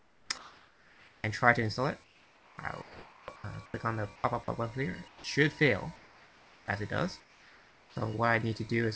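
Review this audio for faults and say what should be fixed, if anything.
Comfort noise in place of the background appears at 0.00–1.24 s, 2.04–3.74 s, 4.16–4.24 s, 5.08–5.24 s, 5.96–6.68 s and 7.20–7.96 s. In these pauses the real background is likely replaced by synthetic noise generated at the receiver under discontinuous transmission. The level shifts by about +1 dB at 4.16 s, about −6 dB at 5.08 s, about −4 dB at 5.96 s and about −5 dB at 7.20 s. On a spectrogram, the noise floor changes texture and brightness at each boundary, with a uniform, featureless fill. On the waveform, the quiet sections step up or down in level at each boundary. To prevent this, disable DTX on the sender, or lower its voice-detector threshold, so the real background is transmitted.

An onset clipped by the voice detector occurs at 2.56 s. The first 20 ms of the returning sound is likely missing because the detector was late to register activity, so comfort noise covered those first milliseconds and the sound begins abruptly without its soft attack. 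On the waveform, the envelope jumps from the noise floor to full level with no ramp. On a spectrogram, energy appears as a sharp vertical edge rather than building up. To prevent this, give the voice detector a lookahead or hangover-before-onset, or turn off DTX. The whole clip also carries nothing above 8 kHz, which fits a wideband call codec such as G.722 at 64 kbps.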